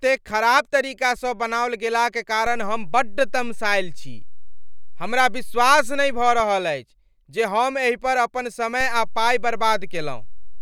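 At 2.47 s there's a DC step: the waveform's zero line suddenly jumps by about -23 dBFS, so you hear a low thump while the speech carries on untouched. The offset sits there until 6.40 s, where it drops back and gives a second thump. At 8.81 s it jumps again by the same amount and stays offset right to the end, so that last one only thumps on the way in.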